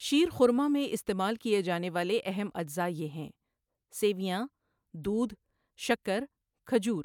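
No technical faults are audible anywhere in this speech recording.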